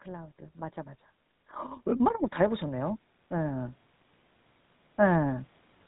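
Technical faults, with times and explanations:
Throughout: GSM full-rate codec. Audibly buzzy, gravelly speech with nothing above 3.8 kHz, consistent with a 13 kbps pulse-excited vocal-tract model discarding excitation detail.
0.05–3.81 s: automatic gain rising. Level climbs gradually by about 11 dB, voice and background swelling together as the gain control compensates for input it judged too quiet.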